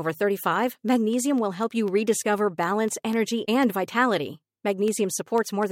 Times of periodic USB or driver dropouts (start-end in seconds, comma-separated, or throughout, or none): 0.14-5.63